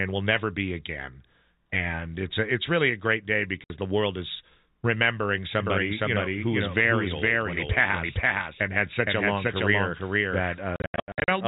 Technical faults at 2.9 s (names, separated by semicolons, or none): none